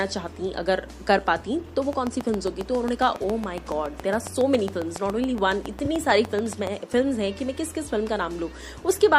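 From 1.93 to 6.68 s a train of clicks ticks evenly at about 7.2 per second, some 40 pulses peaking about 10 dB above the sound, likely from nearby electrical interference. Their steady spacing sets them apart from random crackle. At 5.85 to 5.87 s, repeated frames cause a brief stutter where 24 ms of audio plays twice, consistent with one compressed frame duplicated. Unlike the clicks, this repeats content and lengthens the audio.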